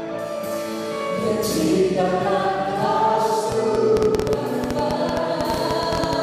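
A train of clicks runs from 3.52 s to 6.14 s: around thirty similar pulses at roughly 10 per second, unevenly spaced and well above the surrounding level. They likely come from electrical interference or a faulty connection, and they tick over the sound and through the gaps.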